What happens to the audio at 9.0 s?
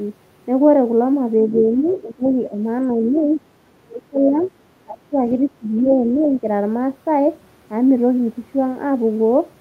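Nothing goes wrong at 9.0 s; the speech there plays through intact, with no dropout, click, distortion or other fault.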